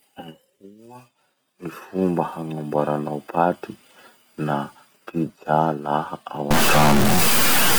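Speech with a stuck bit from 6.51 s to the end at 7.79 s, likely from a failed data line or converter. It causes harsh, buzzy distortion with large steps of around -10 dBFS. Unlike clipping, even pauses fill with noise.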